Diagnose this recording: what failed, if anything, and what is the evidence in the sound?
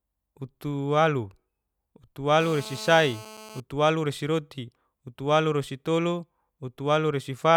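A GSM phone buzz enters at the analogue stage from 2.40 to 3.60 s, sitting about 18 dB below the speech. It is a hard, raspy tone at about 217 Hz with a dense stack of harmonics, holding steady through that stretch. That steadiness fits a handset mid-call, whose TDMA radio bursts the input wiring rectifies into audio. Mains hum, by contrast, sits at 50 or 60 Hz and sounds smoother, without this gritty pulse texture.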